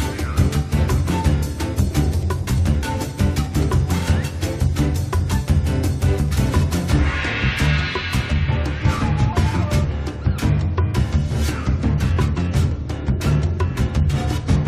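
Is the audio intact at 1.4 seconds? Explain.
Yes, the audio is intact at 1.4 seconds, with no dropout, glitch or other fault at that moment.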